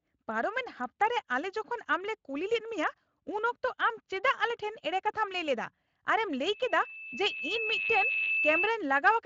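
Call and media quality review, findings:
Loudspeaker feedback squeal, 6.52–8.75 s. Steady tone at 2.6 kHz. It swells over roughly a second and a half. Peaks about 5 dB above the speech. Probable component is an open microphone hearing its own loudspeaker. Loop gain exceeds one at 2.6 kHz, so that tone feeds itself and keeps growing. Stops at 8.75 s. Speech underneath shows light Speex coloration and is band-limited near 7.6 kHz.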